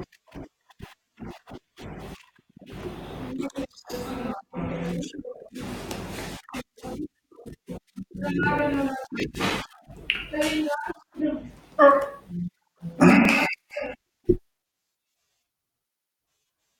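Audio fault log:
8.43–9.81 s, CD scratch ticks: ten ticks at roughly seven per second, each only a few milliseconds long, where a surface blemish defeats error correction once per disc revolution and the player patches the gap. The steady rotation-locked spacing and the uneven strength distinguish them from random crackle or one-off digital clicks.
12.49–14.17 s, CD scratch ticks: twelve shorter ticks, again about seven per second, from the same once-per-turn loss of unrecoverable data being interpolated or muted. The regular rhythm and uneven strength mark them as scratch ticks rather than buffer dropouts.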